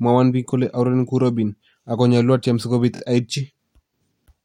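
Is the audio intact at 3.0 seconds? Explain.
No. Repeated frames occur from 2.95 to 3.00 s, just after "atyem si kobiit". The stutter there points to a single compressed block of about 23 ms being decoded and played two extra times in a row, so the same sliver of speech sounds three times back to back. The spliced copies don't belong at that point in the timeline, so the speech is briefly pushed out of step, and the clip runs 46.4 ms longer than it should.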